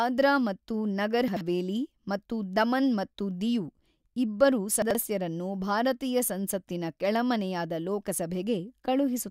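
At 1.28 to 1.41 s, and again at 4.82 to 4.95 s, the speech has chunks out of order. One 42.67 ms chunk plays two chunks late, after the audio that should follow it. Nothing is missing. Three hard joins give a brief jumbled stutter.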